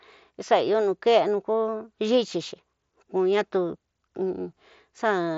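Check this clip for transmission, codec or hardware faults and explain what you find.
No transmission, codec or hardware faults turn up in this clip.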